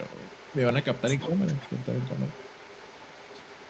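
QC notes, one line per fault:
0.03–0.58 s and 0.82–3.7 s, echo leak: a faint copy of the speech trails about 146 ms behind, roughly 20 dB down, likely from incomplete echo cancellation at a loudspeaker end.
1.27–1.34 s, speech suppressed in double talk: the speech dips by about 5 dB for 70 ms, likely the echo canceller attenuating both talkers during overlap.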